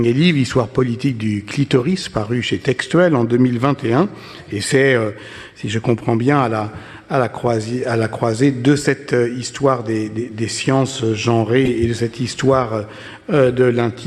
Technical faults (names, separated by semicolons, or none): corrupt frame decoded